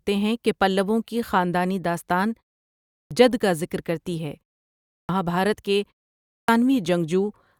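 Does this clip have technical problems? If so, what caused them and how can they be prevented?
Yes. Clipped start after a pause occurs at 2.82–3.11 s, 4.81–5.09 s and 6.22–6.49 s. After pauses of 0.48, 0.46 and 0.38 s, the output device dozes and needs time to wake, so roughly 0.26–0.29 s of each onset is lost. On a waveform, the sound jumps straight from flat silence into the speech. On a spectrogram, each onset shows a hard vertical edge with no build-up. Disabling the device's idle power saving, or feeding it a continuous low-level signal, keeps it awake.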